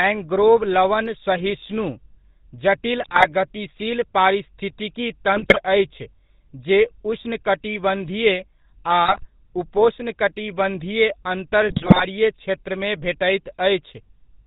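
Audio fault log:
Throughout: GSM full-rate codec. The audio is cut off above 4 kHz and has a buzzy, gravelly roughness from the pulse-driven vocal-tract model, consistent with 13 kbps coding.
3.02–3.26 s, 5.36–5.62 s, 9.04–9.28 s, 11.68–12.05 s: GSM bit errors. Corrupted filter, pitch and gain values distort the decoded frames, producing squawks, pops and gargling.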